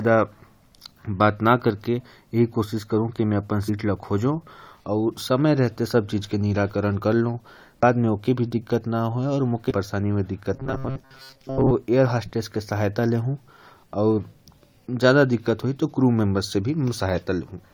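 Damaged data in the compressed stream causes brief disruptions at 3.68 s, 7.82 s and from 9.69 to 9.72 s. The decoder loses sync and searches for the next frame. From 10.54 to 11.72 s, robotic sound appears, likely from repeated short buffers. Most of the speech is replaced by repeats, giving a rigid 133 Hz buzz.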